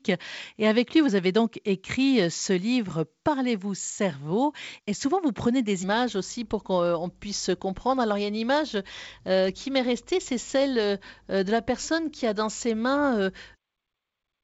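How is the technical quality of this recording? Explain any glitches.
No glitches or technical faults can be heard here.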